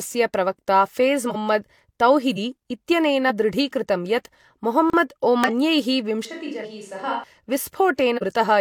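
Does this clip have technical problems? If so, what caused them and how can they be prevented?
Yes. Six times the speech lurches forward: at 1.26 s, just after "प्रवक्ता फेज़"; at 2.28 s, just before "इत्यनेन दृढीकृतं"; and at 3.25, 5.44, 6.60 and 8.13 s. Each time, somewhere between roughly 50 and 300 ms of audio is lost. These are compressed frames skipped: whole frames were missing or rejected as damaged by the decoder. To prevent it, check file integrity and use error-protected transport so that frames arrive intact.

At 4.90 s a hard-edged hole about 35 ms long cuts in. This is a block of digital silence: the samples were replaced by zeros, most often because the output buffer wasn't filled in time. Larger audio buffers and a less heavily loaded processing thread prevent such underruns.

From 6.25 to 7.24 s the voice suddenly turns hollow and roomy, thinner in the bass and about 10 dB quieter. 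Background noise rises to roughly 35 dB below the speech, and the sound snaps back just as abruptly at the end. This is a switch to a distant microphone, most likely because the close microphone's signal dropped out and a farther one, such as a camera microphone, filled in. Securing the close microphone's connection and monitoring its feed prevents this.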